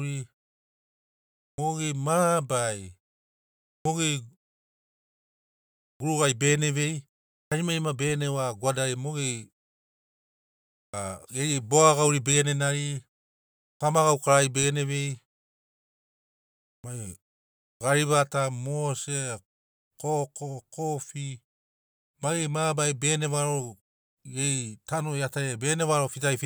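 Clipped start after a pause at 1.51, 3.78, 5.93, 7.45, 10.86, 13.74, 16.77 and 17.74 s: the output wakes late, swallowing about 70 ms of speech onset, so waveforms jump abruptly from flat silence, with the spectrogram showing hard-edged starts.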